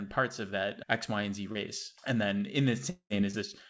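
At 1.52 s there's a short concealed packet loss: about 30 ms of the call didn't reach the decoder in time, and the receiver patched the hole by stretching out the sound it already had before blending back into the real signal. It comes across as a quick smear or wobble lasting roughly 0.06 s. The same thing happens again at 3.31 s, another 30 ms hole covered mostly by the continued sound, so you get another brief smear.

Right after "then in", at 2.90 s, the sound turns into a fading buzzy continuation of what came before, runs for about 0.2 s, then drops to near silence before the audio picks up again around 3.13 s with a chunk missing. That's likely a long network dropout. Nothing arrived for about 210 ms, the concealment carried the last sound until it ran out, and the lost part was never played. All of this sits on top of a call path where nothing reaches above 8 kHz, which points to a G.722 call codec.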